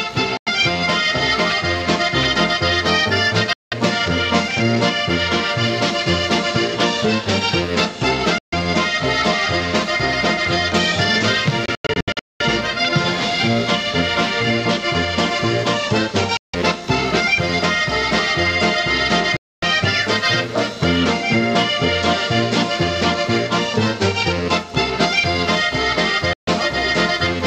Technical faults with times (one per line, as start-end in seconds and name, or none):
0.00-27.47 computer activity noise
0.37-0.48 Bluetooth dropout
3.53-3.74 Bluetooth dropout
8.38-8.54 Bluetooth dropout
11.66-12.42 Bluetooth dropout
16.37-16.55 Bluetooth dropout
19.37-19.64 Bluetooth dropout
26.33-26.48 Bluetooth dropout